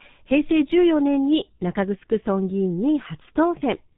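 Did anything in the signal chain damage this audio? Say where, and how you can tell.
Yes. G.723.1 codec damage runs throughout: the speech is muffled and hoarse with nothing above 4 kHz, and its 30 ms frames smear consonants, consistent with roughly 6.3 kbit/s.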